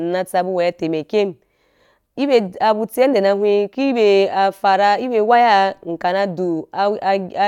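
No technical faults are audible.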